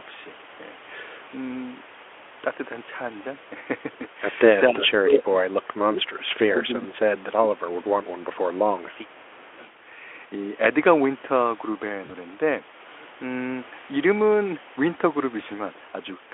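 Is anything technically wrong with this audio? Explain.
Yes, there are three kinds of fault.

Speech suppressed in double talk, from 4.69 to 6.98 s and again from 7.19 to 7.99 s. The likely cause is an echo canceller that could not tell this talker apart from the far side's loudspeaker echo while both were talking, so it pulled everything down. The voice sinks by as much as about 30 dB, dipping and breaking up for roughly two seconds in the first stretch and most of a second in the second.

An echo leak at 9.36 to 9.72 s. On one side, a loudspeaker's sound got back into the microphone, and the canceller there, likely falling short, let some of it through to be sent back. The result is a faint, delayed copy of the voice, arriving 438 ms behind and sitting about 35 dB below the speech.

VoIP packet loss concealed by the speech codec at 12.05 to 12.11 s. About 40 ms of audio went missing, which fits two lost 20 ms frames. 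The Speex decoder filled the gap by extending the last pitch and spectral shape at falling gain. That produces a short, stretched, fading patch, and the voice sounds weakened for a moment as the decoder recovers. The Speex coding in the rest of the clip adds little or no audible roughness of its own.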